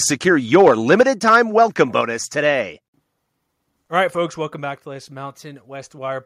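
From 0.54 to 1.82 s the loudest syllables carry a harsh, crackling edge: microphone overload, with peaks driven about 4 dB past the converter's limit and a small fraction of samples flattened, likely from input volume set too high for the converter. The speech then abruptly drops by about 4 dB at 1.01 s and again at 2.01 s, background included, and by about 3 dB at 4.26 s, just before "welcome back to this". Each drop is a microphone volume step-down, likely the call software lowering the device's input gain in one step after detecting overload.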